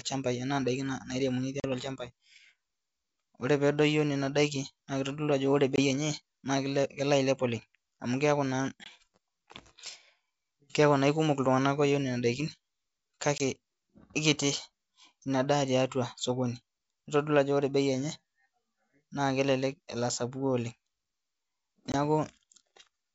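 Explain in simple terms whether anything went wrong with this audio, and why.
Five short holes cut into the speech. This is packet loss on an ADPCM call. Missing pieces become silence: about 40 ms at 1.6 s, roughly two packets, then about 20 ms each at 5.76, 8.84, 13.38 and 21.92 s. The decoder loses track, so speech returns slightly distorted, then settles.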